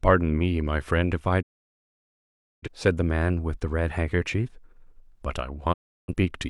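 Speech with two digital broadcast dropouts: the receiver lost good frames and muted, fading out over about 20 ms. Sound vanishes from 1.41 to 2.68 s (about 1.2 s gone) and again from 5.72 to 6.14 s; whatever was sent then never comes back.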